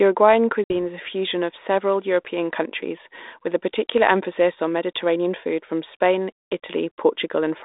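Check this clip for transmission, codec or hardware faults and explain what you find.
One transmission fault is audible, on a 32 kbit/s G.726 ADPCM line passing roughly 250 Hz to 3.7 kHz.

Packet loss on an ADPCM call occurs from 0.64 to 0.71 s. About 60 ms of audio, roughly three packets, went missing and was filled with silence, leaving a hard-edged gap. The receiving decoder's adaptive predictor and step size then no longer match the sender's, so the speech resumes from a mismatched state until the two realign.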